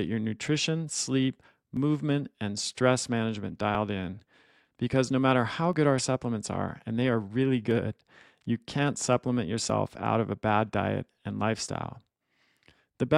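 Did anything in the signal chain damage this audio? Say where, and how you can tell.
Yes. The speech has two tiny skips, each a loss of a few milliseconds, at about 1.77 s and 5.73 s. This is an overlap between stream segments, a streaming and playback fault. The stream is cut into 2-second segments whose time stamps overlap. The player trims the overlap as if that audio were duplicated, but it wasn't, so a few milliseconds of real speech disappear. The waveform then jumps abruptly at the splice.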